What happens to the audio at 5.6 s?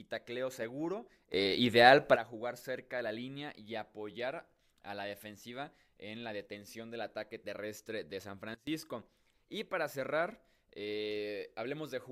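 Nothing goes wrong at 5.6 s; the speech there plays through intact, with no dropout, click or distortion.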